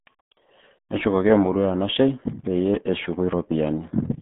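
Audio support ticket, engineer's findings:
RealAudio 14.4 codec damage, entire clip. Speech muffled and gargly. Nothing above 3.8 kHz; usable band about 150 Hz to 3.5 kHz. Heavy low-rate coding artefacts fit RealAudio 1 at 8 kbit/s squeezing speech into a dial-up-sized stream.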